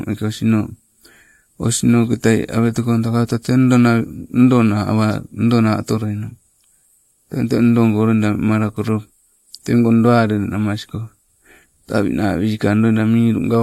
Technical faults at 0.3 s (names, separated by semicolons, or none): none